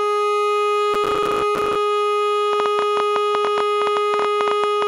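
Processor overload crackle runs from 0.94 to 1.76 s. For under a second the system repeatedly fails to deliver its small audio buffers on time, and each missed buffer comes out as a brief hole of silence with abrupt edges. The gaps are tiny, consistent with buffers of around 5 ms, and dozens of them fall in quick succession, so the music takes on a gritty, tearing crackle that vanishes once the overload clears.

A train of clicks follows from 2.53 to 4.83 s. Roughly thirty sharp, similar-shaped pulses land at an average of 10.5 per second, but with irregular spacing, so the ticking stumbles rather than keeping a steady beat. They stand out at about 15 dB above the music, popping clearly over it throughout. The likely source is electrical interference from nearby equipment or a faulty connection or power supply.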